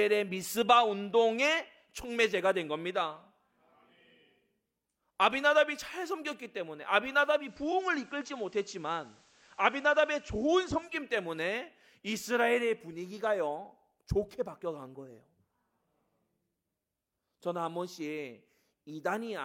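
It's a speech clip, and from 7.34 s to 11.00 s you can hear digital radio blending to analogue: the receiver lost its digital stream and cross-faded over about 205 ms to the station's FM broadcast, then back. While it's on FM, the level sits about 1 dB lower, and a light hiss rises to roughly 35 dB under the signal.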